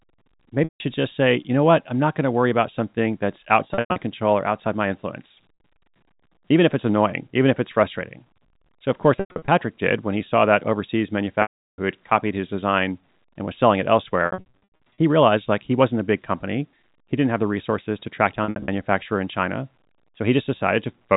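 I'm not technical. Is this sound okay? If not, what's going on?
No. The speech has packet loss with pitch repetition at 0.64, 3.68, 5.54, 9.16, 11.42, 14.26 and 18.44 s. Chunks of audio went missing, and the receiver filled each gap by repeating the last bit of voice. That gives a brief buzzy hold or a dropout, longest near 11.42 s.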